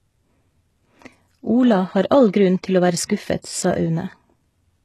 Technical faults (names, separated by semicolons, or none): HE-AAC compression; pre-echo